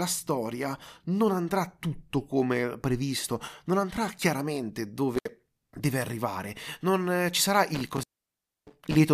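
Intermittent contact at 5.15–5.29 s and 7.75–8.95 s: a loose connection opens briefly, cutting the speech for about 65 ms, then 636 ms, with crackle at each edge and faint hiss between.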